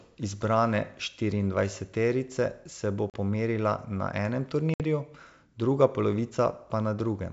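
At 3.10 s, after "štiriindvajseterice se bo", a hard-edged 40 ms gap opens, and at 4.74 s, after "na enem", a 60 ms one, each followed by slightly distorted speech before the sound settles. This is packet loss on an ADPCM call: about two and then three lost packets were filled with silence, knocking the decoder's predictor and step size out of step with the sender's.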